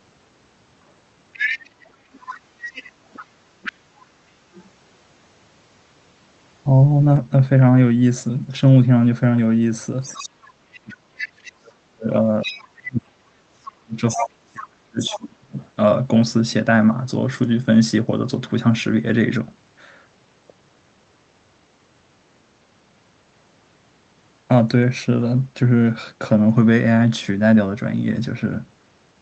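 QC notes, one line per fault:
1.33–3.72 s, 10.04–11.49 s, 12.41–12.66 s, 14.08–14.27 s, 14.99–15.68 s: other side's voice leaking through. The echo canceller likely left part of the far-end loudspeaker signal in the microphone feed, so a second voice sits under the talker at roughly 10 dB down in the first, third and fourth spots and nearer 15 dB down in the others. It comes through as one long stretch near the start, then shorter scraps around 10 to 15.7 s.
10.24–15.53 s: speech suppressed in double talk. With both sides talking at once, the canceller likely could not tell the near talker from the loudspeaker echo and pulled the whole signal down to be safe. For about five seconds the talker's level dips and breaks up, at its deepest by around 40 dB, so syllables fade or vanish in pieces while leaked far-end fragments continue underneath.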